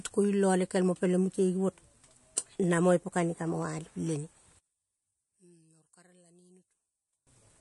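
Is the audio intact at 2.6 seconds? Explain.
No. At 2.64 s there is a single sharp click, a thin vertical line across the spectrum, most likely from dropped samples: a tiny fraction of a millisecond is missing, so the waveform jumps straight to a later value. Unlike a dropout, no speech is lost, only the click.

Around it, the speech carries plainly audible MP3 compression, with a watery, swirly texture as weak frequency lines switch on and off from frame to frame, and nothing above 11.3 kHz. That fits a low bitrate near 48 kbps. The shifting artefacts set it apart from a simple low-pass filter.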